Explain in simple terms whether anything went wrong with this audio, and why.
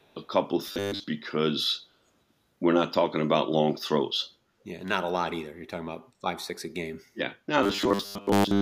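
From 0 to 0.28 s there is an echo leak. A very faint copy of the speech comes back about 0.37 s late. The likely cause is a speakerphone on the other end. Its echo canceller did not fully remove what its microphone picked up.

From 0.67 to 1.04 s, and again from 7.63 s to the end, there is robotic sound from repeated short buffers. The speech turns into a stiff, metallic buzz at a steady low pitch, 100 Hz. Most of the sound in those stretches is repeated. The likely cause is audio arriving too late, so tiny slices of about 10 ms were replayed.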